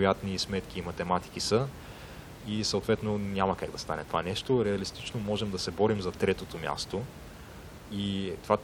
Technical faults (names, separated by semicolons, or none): none